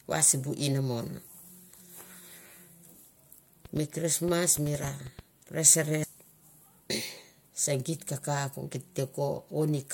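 A pulse source, likely electrical interference from nearby equipment or a faulty connection or power supply, injects a train of clicks into the speech from 3.65 to 5.20 s. The pulses arrive about six times a second but unevenly spaced, around ten of them, each with much the same shape and peaking at roughly the level of the speech itself. They come through as a ragged ticking or popping laid over the talking, and they are audible in the gaps between syllables too.

At 6.02 s, compressed frames were skipped: the decoder never played a block of the coded stream, either because it was missing or because it was rejected as damaged. The frame length of about 26 ms, and a gap of roughly ten frames, means around a fifth of a second of speech is simply gone, so the audio lurches forward.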